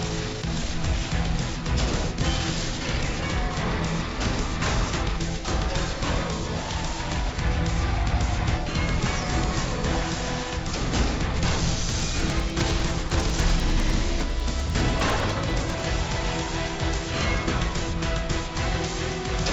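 From 11.8 to 15.8 s the resampler restarted on every block, going from 16 kHz to 48 kHz in 100 ms chunks, leaving steady 10 Hz ticks over the sound.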